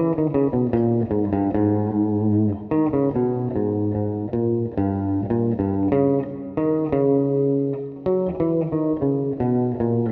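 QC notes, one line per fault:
1.91–1.94 s, compressed frames skipped: the audio jumps forward by roughly two frames, around 40 ms of material lost, which fits a 20 ms codec frame length. The decoder never played those frames, and the overlap between neighbouring frames smears the join into a short soft blip. On the waveform the envelope shifts abruptly without a sharp spike. On the spectrogram a brief blurred vertical seam breaks the continuity of the harmonic and noise patterns.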